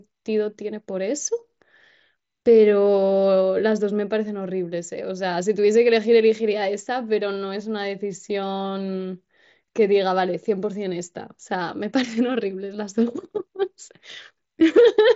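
Nothing stood out on listening to this speech clip, which comes through a Bluetooth mSBC headset codec link with its content ending a little below 8 kHz.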